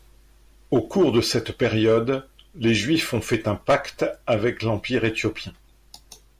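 No technical faults can be heard anywhere in this speech recording. The sound stays consistent with itself at every moment, with no point where anything goes wrong.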